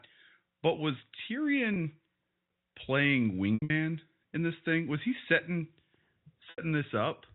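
Packet loss with pitch repetition occurs three times. At 1.74 to 1.76 s, a 20 ms gap gives a brief buzzy hold. From 3.54 to 3.70 s, 140 ms drops out in bursts, the longest 80 ms. It fades toward silence. At 6.50 to 6.58 s, an 80 ms loss fades similarly. The steps fit 20 ms packets.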